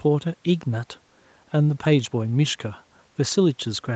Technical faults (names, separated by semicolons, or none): none